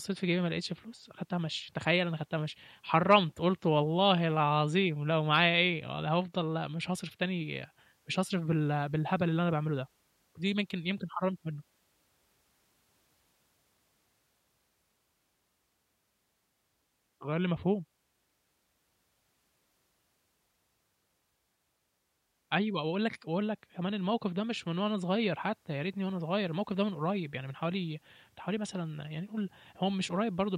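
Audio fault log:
No fault is heard anywhere in the speech. Nothing here calls for an entry in this log.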